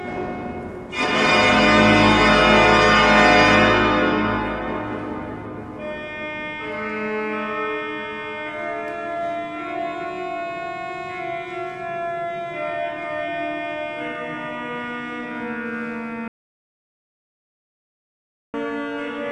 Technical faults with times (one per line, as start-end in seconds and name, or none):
16.28-18.54 audio dropout to silence